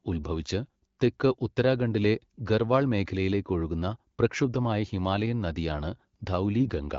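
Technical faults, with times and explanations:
6.61–6.70 s, AMR bit errors: right at the end the speech turns briefly hoarse and gargly. That burst fits about four 20 ms frames whose weakly protected bits came in flipped, a few percent of them, on top of otherwise clean 12.65 kbit/s AMR-WB. The pitch and level hold roughly steady, but misplaced excitation pulses and slightly wrong gain and spectral values scratch up the texture.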